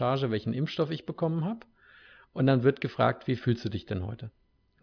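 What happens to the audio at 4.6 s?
Nothing goes wrong at 4.6 s; the speech carries on intact through that moment.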